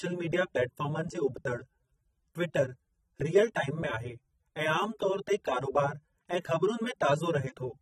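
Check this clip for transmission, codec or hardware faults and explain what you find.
One codec fault runs through the whole recording: AAC compression damage, plainly audible from start to finish. The speech sounds dull and smeared, with a warbling, fizzy texture on sibilants and sustained sounds. The likely cause is AAC-LC coding at a low rate, consistent with about 24 kbps. At that rate the encoder lowers the bandwidth and leaves gaps or noise-filled bands in the spectrum.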